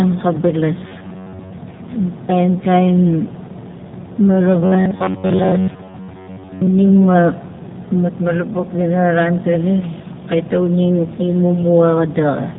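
Throughout, the speech carries plainly audible AMR narrowband mobile codec damage: nothing passes above 3.8 kHz, and the buzzy, synthetic vocal-tract coding fits a low rate around 7.4 kbps.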